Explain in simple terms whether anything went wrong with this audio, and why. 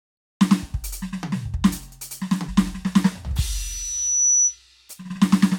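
A microphone picked up its own loudspeaker, causing loudspeaker feedback squeal. From 3.44 to 4.59 s, a piercing tone near 6 kHz swells up over the music.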